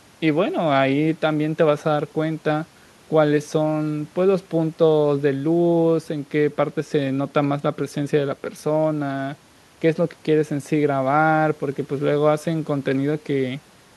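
No technical faults can be heard anywhere in the speech. Nothing in the recording or playback chain stands out as a problem.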